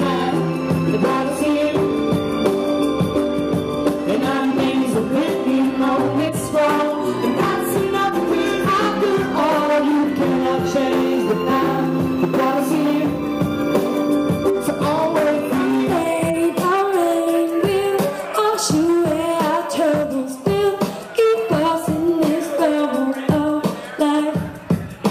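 From 10.97 to 14.14 s the audio takes on a gritty, inharmonic fizz riding on its louder and brighter moments, roughly 30 dB below the signal. This is crude rate conversion: samples are simply repeated rather than filtered, which fits a 32 kHz to 48 kHz change, a 3:2 step that stamps a fixed repeating error pattern. Unlike steady hiss or quantisation noise, the fizz tracks signal level and high content, then vanishes outside that window.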